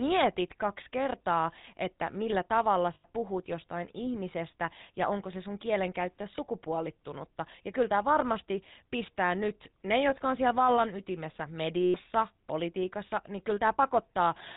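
Throughout, the speech has passed through the GSM full-rate codec, consistent with its 13 kbps rate. A pulse-driven vocal-tract model with thinned excitation rebuilds it, cutting everything above 4 kHz and leaving a clearly audible buzzy, gravelly roughness on the voice.

Lost GSM frames occur at 2.94 to 3.05 s, 6.36 to 6.39 s, and 11.82 to 11.95 s. Each time, the decoder stands in for missing data by reusing the last good frame's settings. The sound freezes into a brief rough, metallic ring, longest in the last, 120 ms gap.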